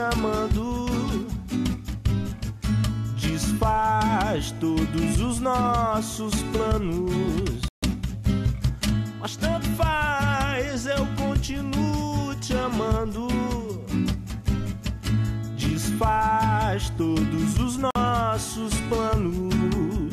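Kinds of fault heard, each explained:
Digital broadcast dropout: the receiver stopped getting decodable frames and muted until valid ones returned, so the sound cuts or quickly fades to silence and resumes with the intervening material simply gone. It happens twice, a gap of about 0.15 s at 7.68 s and a shorter one of about 0.05 s at 17.91 s, lengths that fit whole decoder frames of roughly 24 ms. Unlike an analogue fade or tape dropout, there is no dulling or gradual level sag, only a hole.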